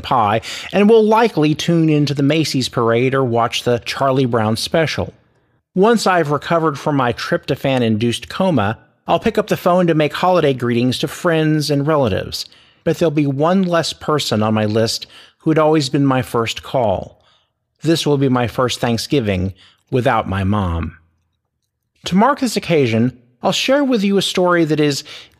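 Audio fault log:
No fault is heard anywhere in this speech clip.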